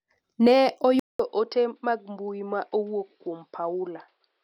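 A speech recording breaks at 1.0 s. There is a 200 ms silence, then the sound turns dull, with nothing above 5.5 kHz. The level drops by about 5 dB. A new, faint noise floor appears. The likely cause is an input switched to a poorer device. It lasts to the end.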